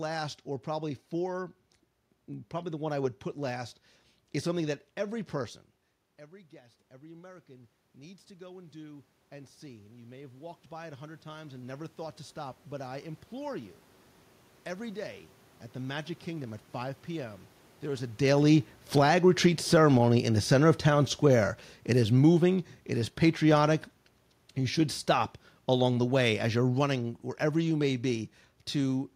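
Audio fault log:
6.17–16.54 s automatic gain rising: voice and room noise swell together by about 17 dB, as the gain control slowly compensates for input dropping about 21 dB when the talker moved away just before.
18.28–29.11 s automatic gain falling: the sound starts loud, then sinks along with its background by about 15 dB, as the gain control gradually pulls back after the talker came closer shortly before.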